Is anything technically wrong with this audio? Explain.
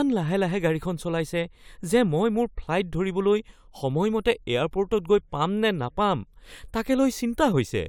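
No, nothing technically wrong can be heard anywhere in this speech recording.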